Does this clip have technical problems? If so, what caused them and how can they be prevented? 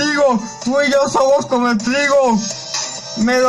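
No, the signal shows no technical problems, so there is nothing here that needs preventing.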